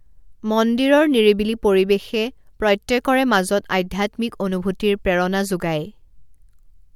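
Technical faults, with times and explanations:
No technical faults can be heard anywhere in this speech.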